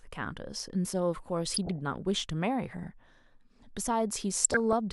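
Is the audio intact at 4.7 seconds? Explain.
No. From 4.44 to 4.73 s the speech is overlaid with DAB burbling, short noise blips and sudden sub-band level jumps over the programme. Under weak reception, stray bit errors slip past the error correction into the MP2 data, so corrupted samples put short blips of noise in single sub-bands and corrupted scale factors make individual sub-bands leap in level for up to a frame. The span fits roughly a dozen damaged frames. Unlike a dropout, the sound never goes silent; it blips and jumps in level instead.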